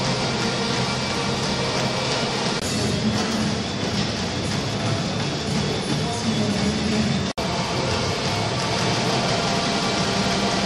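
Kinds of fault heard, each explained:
Doubled audio track, from 8.73 s to the end: a second full-band copy of the sound enters abruptly and trails the original by about a fifth of a second, at roughly the same loudness, so every onset is heard twice with no decay or room colour on the repeat. This is likely caused by the same signal reaching the mix through a second, slower path, or an edit leaving two unaligned copies running.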